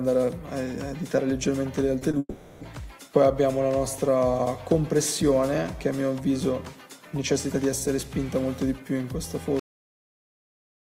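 At 1.99 to 2.03 s and 2.11 to 2.15 s, short concealed packet loss replaces about 20 ms each time with extrapolated audio, heard as brief smears. From 2.19 to 2.63 s, a long network dropout is likely: the last sound continues as a fading synthetic tail, followed by a brief silence before the real audio resumes. At 9.60 s a cut-off end stops the audio mid-sound, dropping straight to digital silence without any natural decay.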